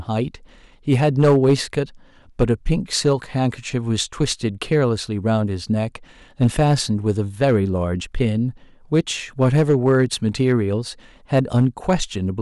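Hard clipping runs throughout the speech, driven about 7 dB too hot, so around one percent of samples are cut flat, giving crackly edges rather than the smoother rounding of soft saturation.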